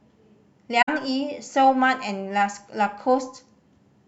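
At 0.82 to 0.89 s, AAC frame loss with muting fades the speech out and back in around a 64 ms gap of silence, consistent with three frames dropped.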